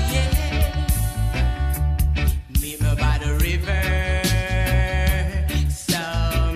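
No technical faults are audible.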